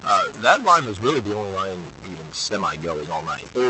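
From start to finish the speech carries a distortion, and the pauses are filled with a gritty noise rather than the plain room noise, which sits about 24 dB below the speech. The likely cause is a stuck bit, one data bit held at a fixed value. Clipping would only roughen the loud peaks. Here the grit also fills the quietest stretches, because flipping signs on small values turns near-silence into noise.

Between 0.28 and 3.57 s, in stretches adding up to roughly two seconds, the speech is cut by the noise suppressor. It mistakes soft consonants, word endings and quieter phrases for background and turns them down by as much as about 13 dB, so they sound swallowed or faint. A packet-loss gap would be abrupt and empty. In these dips instead the background sinks along with the speech, under a call path whose highs stop near 8 kHz.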